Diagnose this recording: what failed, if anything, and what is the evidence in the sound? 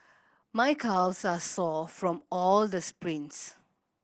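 Opus voice compression throughout, a codec-stage fault: muffled, hoarse speech cut off near 8 kHz, which fits SILK wideband coding at about 12 kbps.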